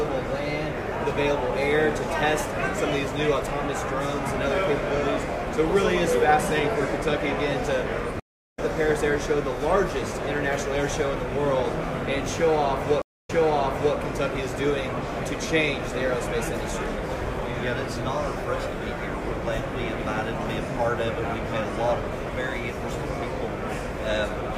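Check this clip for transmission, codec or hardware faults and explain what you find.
Three faults are audible: one dropped buffer and two stream reconnects.

At 1.1 s a small forward jump, with no gap, likely marks a dropped buffer (overrun). A few milliseconds were overwritten before being read and the two sides were spliced directly.

At 8.20 to 8.59 s and 13.02 to 13.96 s there are stream reconnects. Unlike an overrun, each leaves real silence, 380 ms and then 271 ms, while the player restarts its decoder. The first resumes roughly 0.3 s later; the second resumes 672 ms earlier, repeating material.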